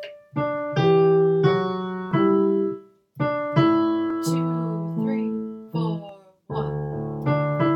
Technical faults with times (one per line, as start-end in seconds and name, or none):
2.11 overlap between stream segments
4.10 overlap between stream segments
6.09 overlap between stream segments